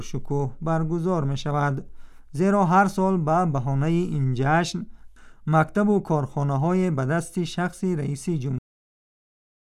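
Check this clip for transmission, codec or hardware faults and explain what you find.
One fault is present, a cut-off end. At 8.59 s the sound stops mid-event, with no natural decay. The final stretch of buffered audio never reached the output. Flat digital silence fills the remaining second of the clip.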